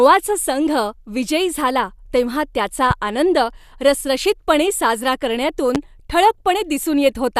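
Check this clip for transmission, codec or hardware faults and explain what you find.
Two loud pops turn up in the speech, one at 2.91–2.93 s between "झाला तेव्हा त्याचा" and "आनंद रसरशीतपणे साजरा", and a stronger one at 5.75–5.78 s right after "त्याचा आनंद रसरशीतपणे साजरा". Each is a single sharp click, roughly 10 dB and then 15 dB above the speech, with the talking carrying on underneath. The likely cause is a brief voltage spike from a switch, static or a driver glitch getting into the signal chain.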